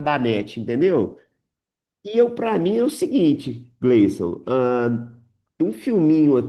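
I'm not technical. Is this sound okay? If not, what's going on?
No. Throughout the whole clip the speech carries Opus voice compression, and the damage is plainly audible. This is a voice codec squeezing the audio hard. It models the lower part of the voice with a simple mathematical sketch of the throat and mouth, and codes the upper part more roughly on top. At this tight setting the sound driving that sketch is coded coarsely, so the voice comes out hoarse and slightly robotic, from start to finish.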